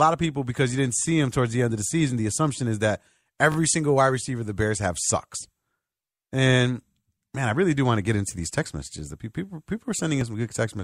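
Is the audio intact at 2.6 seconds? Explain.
Yes, the speech at 2.6 seconds plays through intact, with no audible fault at that moment.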